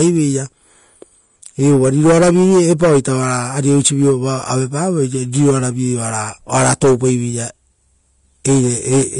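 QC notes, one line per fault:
Throughout: Vorbis compression. Nothing comes through above 10.6 kHz, and the damage is plainly audible: the speech has a hissy, grainy edge, tones sound roughened and attacks smear. That's the likely result of a low-quality Vorbis encode, which fits a bitrate around 34 kbps. The encoder drops the cut-off and quantises the treble so coarsely that fine detail gets swapped for noise of similar energy, hence the grain.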